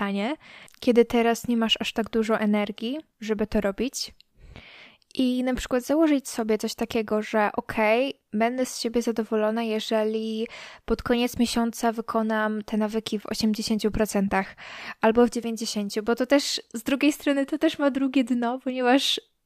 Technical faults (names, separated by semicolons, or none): none